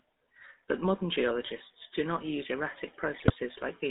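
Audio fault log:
throughout: GSM full-rate codec. The vocal tract is modelled and driven by a regular pulse excitation that keeps only every third sample, as expected of a 13 kbps codec, leaving speech buzzy and gravelly, with plainly audible damage, confined to roughly 250 Hz to 3.7 kHz.
3.18–3.33 s: GSM bit errors. Just after "do not use erratic", corrupted bits reach the decoder, scrambling filter, pitch and gain values across a stretch of several frames, so the speech bends in spectrum, jumps in level, and breaks into squawks, pops and gargling.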